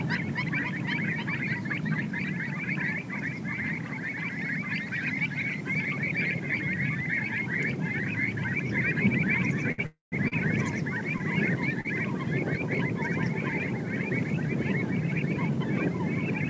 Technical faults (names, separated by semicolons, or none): short stall from a late packet; call audio freeze